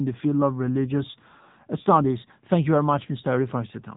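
The speech has been squeezed through the AMR narrowband mobile codec for its whole length, at a low bitrate that fits a mode near 8 kbps. Nothing above about 3.8 kHz survives, so the voice sounds dull and phone-like, with a plainly audible buzzy, synthetic edge.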